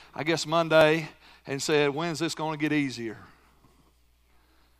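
Dropped buffers (overrun) at 0.81 s, after "I guess", and 2.33 s, before "going to get easier": jumps where roughly 10 ms of speech skips ahead, likely overwritten before being read.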